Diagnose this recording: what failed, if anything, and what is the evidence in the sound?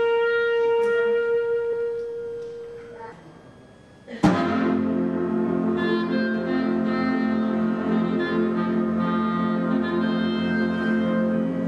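A switching power supply on the analogue side is running in an audible burst mode or beating with another supply, and its whistle is getting into the signal path. It sits throughout as a faint high tone, roughly 40 dB below the programme, wandering between about 1.58 and 1.68 kHz as the supply's load shifts. That drifting pitch is the giveaway: a mains hum would stay locked, but this switching supply whistle slides with demand.

At the codec or storage stage, compressed frames were skipped. Whole 24 ms blocks never reached the output, either lost from the file or rejected by the decoder as damaged, so playback leaps forward. At 1.72 s a few frames vanish, around 70 ms of audio. At 3.11 s several go, near 150 ms. At 5.46 s a single frame drops.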